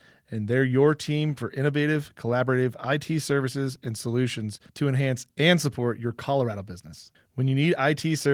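Nothing here needs flagging: it's a short bit of speech carried over Opus voice compression at 24 kbps in fullband hybrid mode, and the codec leaves only a light touch on it.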